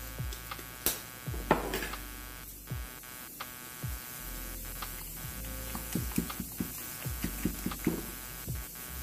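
Computer activity noise runs throughout: a buzzy chirping at roughly 150 pulses per second, fairly loud against the sound, rising and falling with processor load rather than holding steady like mains hum.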